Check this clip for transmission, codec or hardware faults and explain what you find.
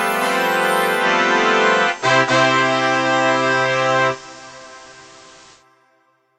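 One transmission fault: digital radio blending to analogue, from 0.94 s to 5.65 s. The receiver lost the digital stream and cross-faded over about 127 ms to the station's FM broadcast, then back. Hiss rises to roughly 30 dB below the signal, and the level shifts by about 3 dB. A codec bandwidth drop would not bring in hiss.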